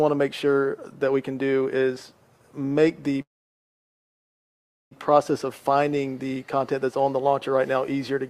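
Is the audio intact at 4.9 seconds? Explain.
No. At 4.9 seconds the clip is still inside a call audio freeze running from 3.21 to 4.93 s. Packets were likely held up in transit, so the jitter buffer ran dry and the receiver had nothing new to play. It stretched the last sound into a brief fading buzz or hiss, then fell to silence for about 1.65 s. When the packets arrived the audio picked up where it left off, with nothing lost but everything after now about 1.7 s later.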